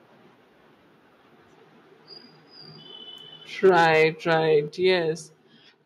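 From 3.65 to 4.03 s the speech takes on a harsh, crackling edge on its loudest syllables, with the waveform peaks flattened and a small fraction of samples pinned at the converter's limit. This is microphone overload: the input is driven about 3 dB past the converter's ceiling, so the tops of the waveform are sliced off, which adds the gritty distortion. The likely cause is a microphone input level set too high.

Just after that distortion begins, at 3.69 s, the speech and the background it sits in drop abruptly by about 3 dB. Further drops follow at 4.68 s, by about 6 dB, and at 5.7 s, by about 4 dB. Each is a clean single step with no fade, so the level falls in stages across the last two seconds. This pattern points to the microphone volume being stepped down. Call software likely detected the clipping and cut the device's input volume in steps rather than gradually.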